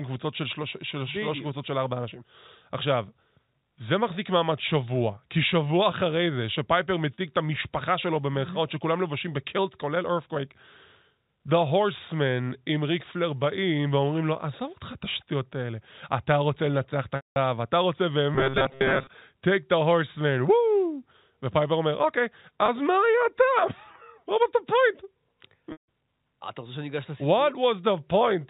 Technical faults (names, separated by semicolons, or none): packet loss with pitch repetition; robotic sound from repeated short buffers